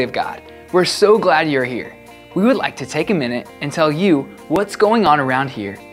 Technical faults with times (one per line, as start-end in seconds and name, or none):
4.56-5.56 periodic USB or driver dropouts